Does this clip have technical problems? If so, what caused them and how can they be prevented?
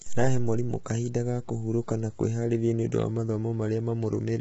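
Yes. The speech sounds rough and grainy from start to finish. Noise fills the gaps between the pitch harmonics, and nothing is heard above 7.8 kHz. This points to low-delay AAC compression, likely AAC-ELD at a bitrate around 16 kbps. Its short frames cannot separate the harmonics cleanly. At so few bits the damage is heavy. To prevent it, give the low-delay AAC encoder more bitrate, or use a longer-frame codec when delay matters less.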